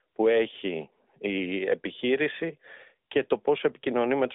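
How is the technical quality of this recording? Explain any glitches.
No glitches can be heard in the speech; it comes through a narrowband mobile path band-limited to about 250 Hz to 3.6 kHz, with the light AMR-style codec colouring you would expect from its highest-quality 12.2 kbps mode.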